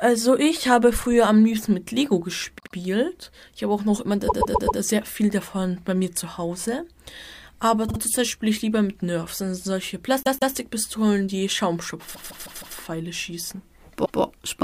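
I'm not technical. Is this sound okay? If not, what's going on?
No. Repeated frames at 2.58, 4.27, 7.88, 10.23, 12.14 and 14.04 s: a short stretch of audio, 50 to 160 ms long, was saved more than once. It plays back one to four extra times, heard as a quick stutter.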